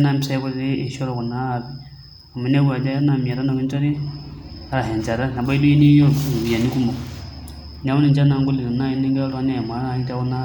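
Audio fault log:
Nothing to log here; I listened to the whole speech recording and didn't hear anything that needs a line.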